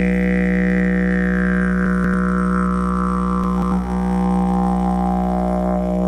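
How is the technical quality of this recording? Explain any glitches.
Two brief glitches. Chunks play out of order at 1.86–2.14 s and 3.44–3.72 s: a roughly 93 ms block arrives two chunks late, so the sound jumbles with three hard joins.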